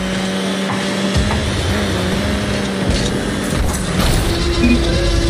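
Nothing is technically wrong with this audio.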